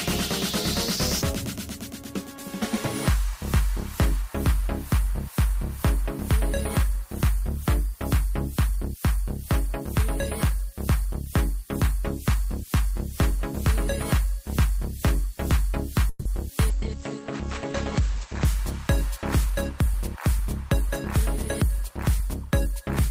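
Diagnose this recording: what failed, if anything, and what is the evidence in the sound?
Call audio freeze at 16.09 to 16.27 s, in the network and jitter-buffer stage of call processing. For about 160 ms the sound does not advance: the last moment is carried on as a decaying buzz or hiss before the audio resumes exactly where it left off, with nothing lost. The likely cause is packets stalling in transit so the jitter buffer emptied, with the receiver filling the wait. The result is a pause inserted into the sound and 160 ms of added delay.

Call bitrate drop from 16.7 to 18.51 s, in the codec stage, driven by the call's bandwidth estimate. The sound turns coarse and dull, with its upper range cut from a full 20 kHz down to 8 kHz. The worst stretch lasts about 1.75 s. That fits the encoder being told to fall from around 32 kbps to 13 kbps. At that rate Opus quantises more crudely and discards high frequencies until the bitrate climbs back.

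Jitter buffer speed-up from 19.05 to 20.89 s, in the receiver's playout buffer. Here the sound runs slightly fast, at roughly 102% of normal pace, while its pitch stays put. The buffer had built up more audio than its target. To trim that backlog the receiver cut many short pitch-period slices in succession, about 40 ms altogether.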